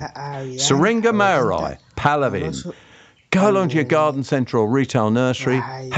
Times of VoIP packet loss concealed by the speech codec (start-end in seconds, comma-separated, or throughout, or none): none